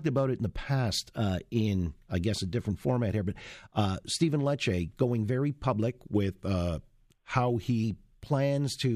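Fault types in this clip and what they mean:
Drift correction step: From 1.15 to 1.67 s, after "it in the past", the speech runs 6% fast and a semitone sharp, then snaps back before "I guess a different". From 6.12 to 7.84 s, after "going very public", it runs 6% slow and 106 cents flat. The cause is likely clock-matching software stepping the playback rate. Unlike wow or flutter, each shift is one steady step with abrupt edges, and tempo moves with pitch.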